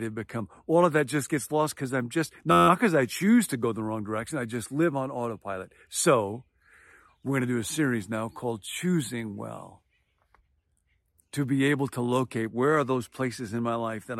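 From 2.52 to 2.68 s there is a system hang loop: the system stalled while the sound hardware kept replaying the same ring buffer, so one 11.61 ms slice of speech repeats 14 times, which fits a 512-sample buffer. At an 86.1 Hz loop rate it sounds like a steady buzz rather than a stutter, and essentially no audio goes missing. A waveform shows identical cycles stamped out back to back, and a spectrogram shows evenly spaced horizontal harmonics at multiples of 86.1 Hz.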